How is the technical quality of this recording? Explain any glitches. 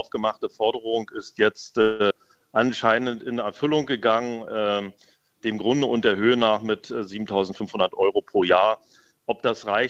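The recording has clear transmission problems. Four kinds of glitch occur, all in the first half or near the end.

From 1.81 to 2.02 s there is a call audio freeze. The last bit of sound is stretched out as a fading buzz or hiss for about 180 ms. It never drops to silence. The likely cause is packets held up in transit, so the jitter buffer ran dry. The receiver filled the wait with synthetic sound. When the audio resumes, nothing is lost. A gap has simply been inserted.

Just after, from 2.10 to 2.12 s, comes a skip ahead. Playback jumps forward, and roughly a tenth of a second of audio is gone. The two sides are joined almost directly, with only a tiny filler between them. Later audio was already queued, so the missing stretch was dropped rather than waited for. This also wins back some of the delay the freeze had added.

From 2.27 to 3.17 s there is a jitter buffer slow-down. The audio runs at about 90 percent speed, but the pitch stays the same. 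Sounds are drawn out. The buffer was running low or had just raised its target delay. To rebuild a reserve, the receiver repeated single pitch periods many times. In total about 100 ms was added.

Two jitter buffer speed-ups follow. From 7.48 to 8.72 s the audio runs at about 111 percent, and roughly 150 ms is cut. From 9.11 to 9.75 s it runs at about 106 percent, with roughly 50 ms removed. Pitch holds steady while the pace feels hurried. The buffer held more audio than its target. The receiver trimmed short pitch-period pieces, again and again, to reduce the delay.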